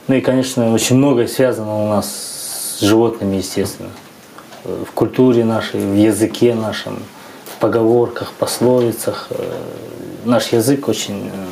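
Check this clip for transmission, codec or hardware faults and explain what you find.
Gain pumping runs through the whole clip. The level breathes in step with the sound: each loud sound is pulled down quickly, a swing of around 10 dB. This points to an input gain set far too high for the microphone, likely with a fast limiter or compressor clamping every peak. Loud and soft passages end up squeezed toward the same level, giving a flattened, squashed sound.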